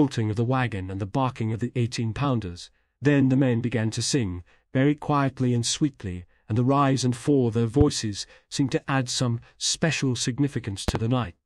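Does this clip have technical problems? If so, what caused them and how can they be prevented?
Yes. A loud pop sits at 7.81 to 7.84 s, and a double pop at 10.88 to 10.98 s, each peaking about 15 dB above the sound, which continues underneath. Unlike a dropout, nothing is lost; a voltage pulse, likely from a plug, switch or static, is added as a thump. Mute the channel and secure connectors before plugging or switching equipment.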